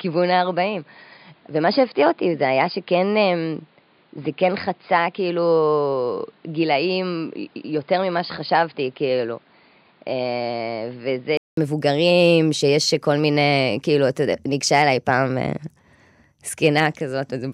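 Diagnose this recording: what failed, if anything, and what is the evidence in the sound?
The capture chain shows an input switched to a poorer device. From 0.0 to 11.57 s the speech is dull, with nothing above 5 kHz, a few dB quieter, and carries its own noise well below the voice. A 200 ms silence then precedes fuller sound, likely a device change. Unlike a codec bandwidth drop, tone, level and noise floor all shift together.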